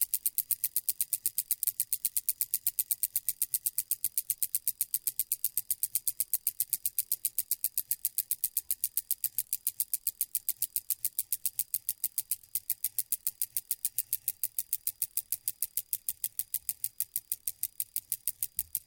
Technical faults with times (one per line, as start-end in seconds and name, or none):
1.63 compressed frames skipped